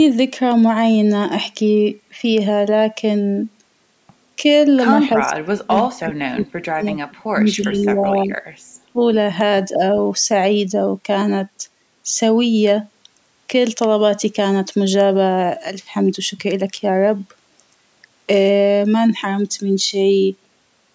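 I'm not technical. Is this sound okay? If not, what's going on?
No. Both ends of the call were likely talking at once, and the echo canceller couldn't tell this voice from loudspeaker echo, so it turned it down. This is speech suppressed in double talk. The voice nearly disappears from 5.16 to 8.35 s and 8.79 to 9.01 s, with a slight dip at 9.74 to 9.81 s.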